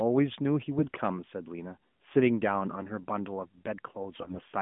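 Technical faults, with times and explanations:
0.78–0.97 s and 4.12–4.42 s, AMR bit errors: the speech turns hoarse and gargly while pitch and level hold, because roughly one bit in ten of each frame's lightly protected part flipped, scrambling pulse positions and fine gain and spectral detail in what sounds like the 12.2 kbps narrowband mode.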